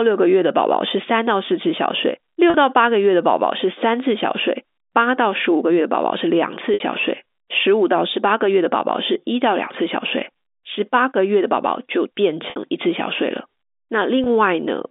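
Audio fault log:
2.50 to 14.26 s, packet loss with pitch repetition: four short dropouts, at 2.50 s (about 40 ms), 6.74 s (60 ms), 12.50 s (60 ms) and 14.24 s (20 ms), each fitting a whole number of 20 ms packets going missing. The receiver fills each hole by looping the last pitch period. The 20 and 40 ms gaps come across as a brief buzzy hold, while the two 60 ms ones run past the fade and dip toward silence before the sound cross-fades back in.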